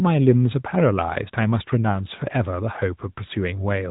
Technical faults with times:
0.00-3.90 AMR narrowband mobile codec

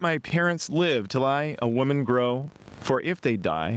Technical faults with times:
0.00-3.77 filter restarted on every block
0.00-3.77 gain pumping

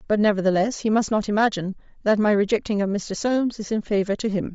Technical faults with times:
0.00-4.54 Bluetooth LC3 compression
3.19 lost LE Audio frames

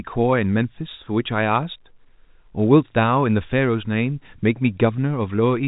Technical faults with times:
none

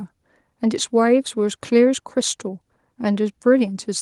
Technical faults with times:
none

